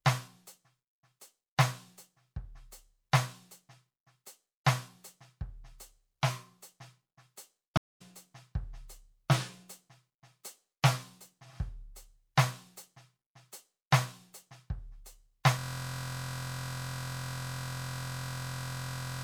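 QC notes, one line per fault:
7.77–8.02 s, stream reconnect: the music drops out for about 225 ms and comes back roughly a fifth of a second further on, so a short stretch of the music is simply skipped. The connection broke, the player went quiet, then reconnected and started a fresh decoder partway through the stream, picking up at the point the stream had reached. The first moment after the gap comes in muted or faded up, because the new decoder has no earlier audio to continue from.
15.59 s to the end, system hang loop: from here the music is replaced by a 23.22 ms fragment repeating exactly, over and over until the clip ends, heard as a steady buzz at about 43.1 Hz. The computer or its audio driver froze while the sound hardware kept cycling through the same ring buffer, replaying whatever it last held. The loop length fits a 1024-sample buffer, and a buffer that short repeats fast enough to fuse into a buzzing tone rather than a stutter.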